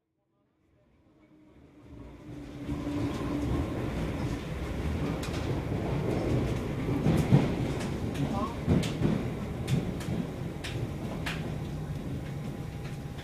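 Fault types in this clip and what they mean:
There are no fault types in this clip, and the gentle fade-in over roughly the first 3 s is ordinary editing.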